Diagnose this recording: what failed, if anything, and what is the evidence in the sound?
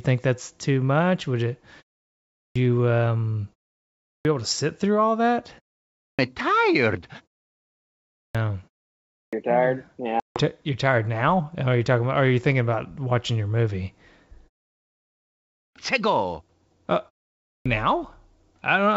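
The playback device is sleeping during silences and needs time to wake, producing a clipped start after a pause. After gaps of 0.37 to 1.09 s, onsets at 2.31, 3.99, 5.94, 8.1, 9.07, 15.5 and 17.39 s begin abruptly, each missing its first 245 to 266 ms.

On the network side, packet loss hit this ADPCM call at 10.20 s: a hard-edged silent hole of 160 ms, around seven packets, ends at 10.42 s. Because the G.722 decoder's predictor and step size lost track of the sender's, the speech returns slightly distorted, settling within some tens of milliseconds.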